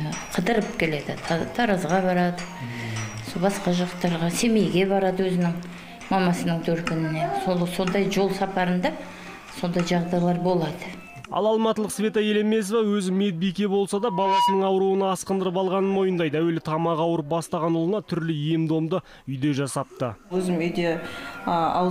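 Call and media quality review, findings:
Loudspeaker feedback squeal, 13.95 to 14.77 s: 965 Hz tone swelling over under half a second to a few dB above programme. Speaker-to-mic acoustic loop exceeding unity gain at that frequency. Spectrogram: single bright horizontal line; waveform: growing envelope.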